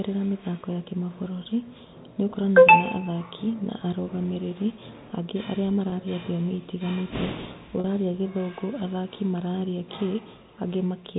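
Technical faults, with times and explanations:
5.90–5.92 s and 7.80–7.84 s, packet loss with pitch repetition: two brief gaps in the speech, about 20 ms and then 40 ms, which fits the loss of one 20 ms packet and then two in a row. The receiver fills each hole by repeating the last pitch period and fading it out, so the first sounds like a slightly held, buzzy instant. The longer second gap holds and fades further before the speech cross-fades back in over the band-limited G.711 telephone line.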